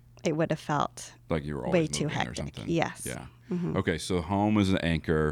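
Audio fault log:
No fault found in this speech clip.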